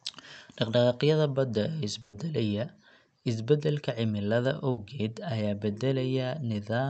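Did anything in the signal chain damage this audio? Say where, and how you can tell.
Yes. There are two bursts of packet loss on the network leg. At 2.01 to 2.15 s you get about 120 ms where the receiver just stretches the last bit of sound, letting it fade as a held buzz or hiss, and then jumps ahead with that stretch of speech gone. The same thing happens more briefly at 4.71 to 4.79 s, about 60 ms. The concealment fills the holes, but the underlying audio isn't coming back. The call codec's top end stops around 8 kHz.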